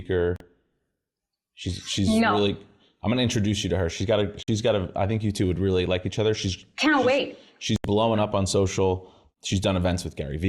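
Three short gaps break the speech: at 0.36 s for 40 ms, at 4.43 s for about 53 ms between "got a" and "got a I think", and at 7.76 s for 80 ms between "can't she's wait" and "blowing up on social". Each is a silence, most likely a Bluetooth dropout where a few packets arrived too late. Unlike a stall, the speech resumes further along, with the missing stretch skipped rather than delayed.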